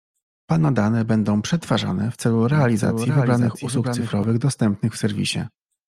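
From 2.52 s to 4.24 s the speech carries a doubled audio track: a second full-band copy runs about half a second behind, a few decibels quieter, most likely from the signal being captured again by a slower path. It sounds like a dry, flat echo with no room tail, switching on and off abruptly. On a spectrogram, each harmonic pattern repeats about half a second later. The waveform shows overlapping envelopes with hard edges at both boundaries.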